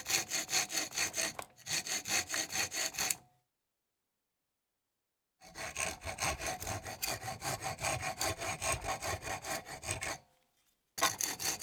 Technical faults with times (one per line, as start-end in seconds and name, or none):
none